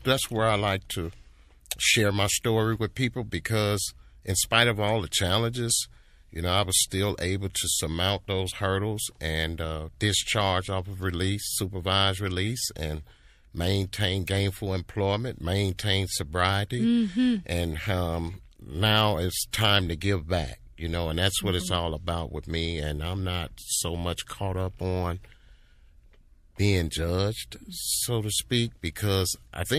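A speech clip with pre-echo at three attacks. A hiss of about 10 dB precedes 7.52–7.55 s, after "I was still able". About 13 dB precedes 15.77–15.79 s, after "and maintain gainful employment". About 17 dB precedes 19.51–19.53 s, after "um now it's". The codec's noise smears ahead of each onset. That fits a 36 ms transform window that never switches to short blocks.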